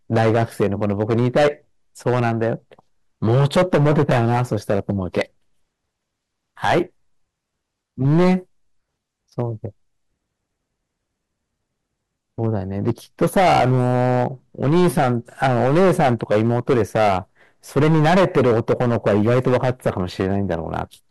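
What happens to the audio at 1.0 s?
At 1.0 s, as throughout the whole clip, the speech is driven about 14 dB past what a stage can pass, so the peaks are sheared flat. That hard clipping hits around seven percent of samples, adding high harmonics heard as harsh fuzz on loud syllables.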